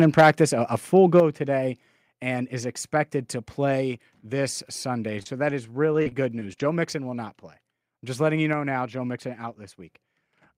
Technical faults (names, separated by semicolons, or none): microphone overload; microphone volume stepped down; lost packet rebuilt from error correction; short concealed packet loss; repeated packet loss (robotic sound)